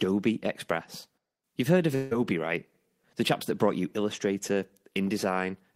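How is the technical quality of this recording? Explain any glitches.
The recording has one glitch. From 1.95 to 2.13 s the speech breaks into a fading buzz or hiss. This is likely a long network dropout. Audio stopped arriving, and the receiver stretched the last sound to fill the gap. Speech returns with about 0.16 s lost.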